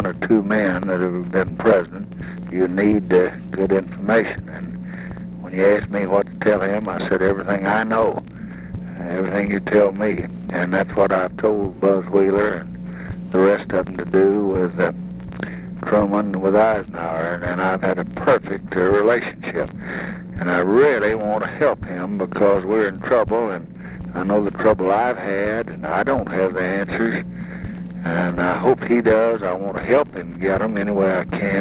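No faults are audible; the band stops at 4 kHz, consistent with a narrowband call path such as G.711 A-law.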